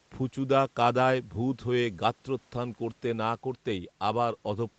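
No technical faults can be heard in the speech, which carries the ordinary band-limiting of a call path, with nothing above about 8 kHz, and the codec's normal coding texture.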